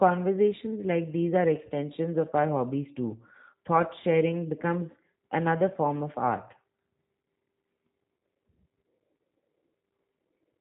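From start to finish the speech runs through a G.729 codec, with nothing above 3.8 kHz and that slightly rough, synthetic buzz typical of 8 kbit/s pulse-coded voice.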